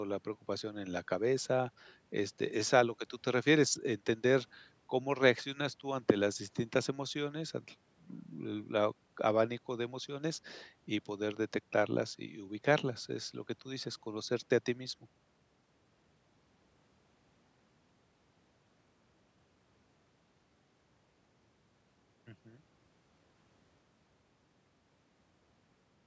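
Nothing goes wrong anywhere in this speech, which just carries the usual marks of a call microphone: the lowest bass trimmed away and nothing above 8 kHz.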